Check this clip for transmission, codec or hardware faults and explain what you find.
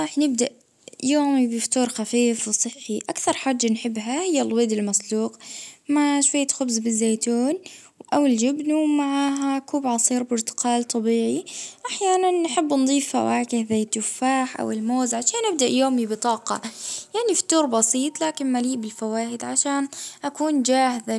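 No faults detected here.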